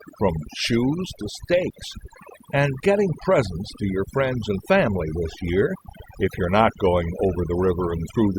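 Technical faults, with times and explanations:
Throughout, overdone noise removal: the denoiser's set too hard, gating bands near its noise estimate, so the background's twinkly near-silence and quiet parts of the speech go with it.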